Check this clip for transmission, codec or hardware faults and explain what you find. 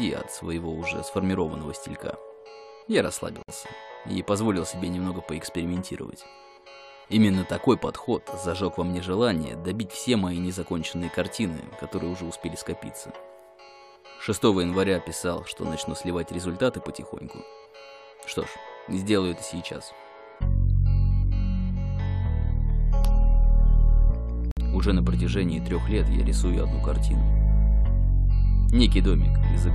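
Two faults are audible, both gaps at joins of encoded pieces. At 3.43 to 3.49 s and 24.51 to 24.57 s, silences of 59 ms and 55 ms cut into continuous sound. Separately encoded segments were joined with their encoder delay and end padding left in. Edges are smeared, and the sound resumes where it stopped.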